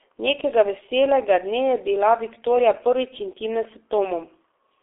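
From start to finish the speech sounds muffled, hoarse and boxed-in, with consonants smeared so that sibilants and stops lose their edges, and nothing reaches above about 3.7 kHz. This is heavy G.723.1 codec damage on a telephone-band line running roughly 300 Hz to 3.5 kHz. The coarse, slowly updated voice model, working in long frames at a rate that fits about 6.3 kbit/s, cannot track fast changes, leaving that rough, dull texture throughout.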